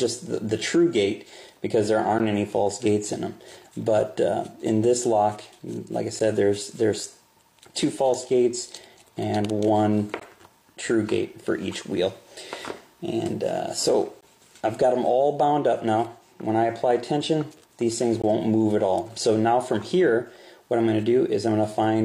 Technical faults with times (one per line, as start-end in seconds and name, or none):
2.19 gap between stream segments
6.19 gap between stream segments
10.20 gap between stream segments
14.21 gap between stream segments
18.22 gap between stream segments